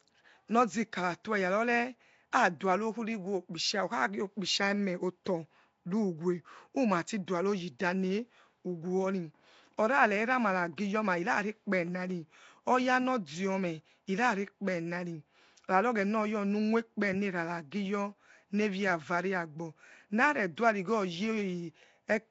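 Speech, with Nellymoser compression throughout: a rough, hissy halo, a smeared underwater quality and nothing above 7.7 kHz, likely from the Nellymoser Asao codec leaving weak bands unbitted and noise-filled. Pre-echo at 7.79 s: a 12 ms hiss precedes a sharp attack, as block-wide quantisation noise spills into the quiet moment before it.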